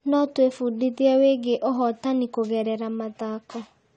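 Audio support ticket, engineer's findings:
Dull, smeared speech with swirly artefacts on sibilants, present throughout. Likely AAC compression, consistent with AAC-LC at a low bitrate around 32 kbps. Encoder discards content above 9 kHz and coarsely quantises the rest. Spectrogram: flat ceiling at 9 kHz.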